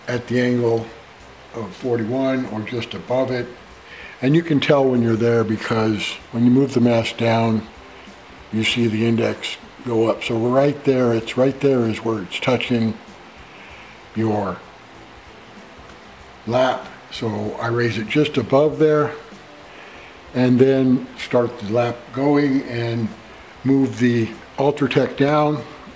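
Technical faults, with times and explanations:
Nothing goes wrong anywhere in this one; the audio simply comes over a normal WebRTC call path with G.722 coding, so there's nothing above about 8 kHz, which is just how that codec works.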